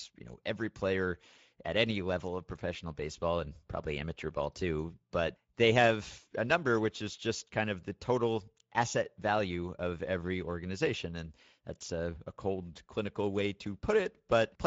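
The speech runs through Speex codec damage from start to finish, plainly audible as a hoarse, noisy graininess, which fits a mid-rate setting around 16 kbps. On a spectrogram, harmonics look smeared, and above 4 kHz there is only diffuse, structureless noise fill.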